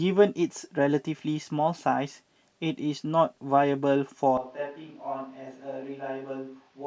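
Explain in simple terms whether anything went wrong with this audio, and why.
At about 4.37 seconds, the recording most likely stops using the close microphone and falls back to one further away, a switch to a distant microphone. From that moment until the end, the speech suddenly sounds roomy and hollow, as if the speaker had stepped back across the room. It loses some of its warmth in the low end, becomes noticeably quieter, and more of the room's background noise comes through underneath it.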